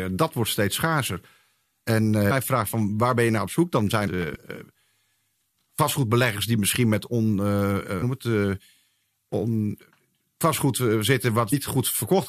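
At 2.30 to 2.32 s, just before "vraagt van waar ben", and at 4.07 s, after "dan zijn", damaged data in the compressed stream makes the decoder lose sync, giving brief glitches. The same happens at 8.01 to 8.03 s and 11.52 s. From 4.22 to 4.36 s, two loud pops land a few dB above the speech, likely voltage spikes from a switch or plug.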